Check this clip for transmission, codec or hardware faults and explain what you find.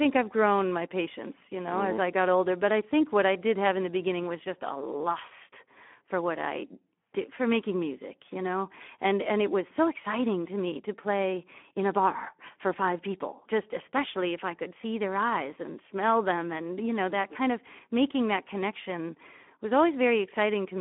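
The whole clip passes through the Speex codec at a low setting, consistent with roughly 11 kbps, over a 200 to 3400 Hz line. Too few bits for the excitation make the speech plainly noisy and hoarse, with nothing above 3.8 kHz.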